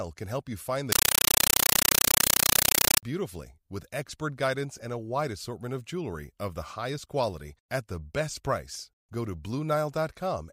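Right after "help you find the", from 0.92 to 3.03 s, the speech gives way to harsh, very loud chattering static: a compressed stream played as audio. Undecoded AC-3 data is being treated as samples, giving 8 ms noise bursts at 31.25 per second.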